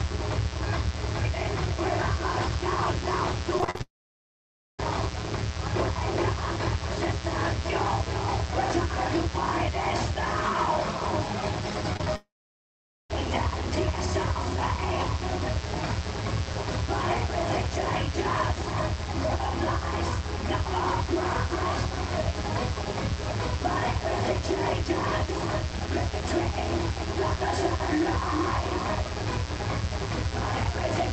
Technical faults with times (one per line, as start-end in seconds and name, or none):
0.00-31.13 mains buzz
3.58-3.80 repeated packet loss (robotic sound)
3.82-4.79 long network dropout
11.93-12.07 repeated packet loss (robotic sound)
12.16-13.10 long network dropout